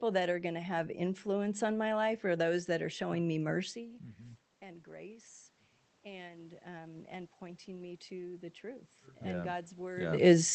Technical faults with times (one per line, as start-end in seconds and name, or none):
6.03-10.55 automatic gain rising